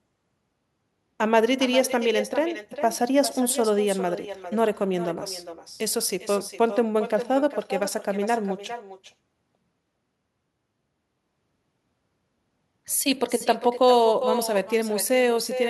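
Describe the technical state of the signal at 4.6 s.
At 4.6 s, as throughout the clip, there is echo with no canceller: the far end is playing the call over a loudspeaker, its microphone is picking that playback up, and nothing in the chain removes it before it returns. The speech is therefore shadowed, roughly 0.4 s later, by a second copy about 10 dB quieter and thinner, so each phrase seems to repeat more quietly.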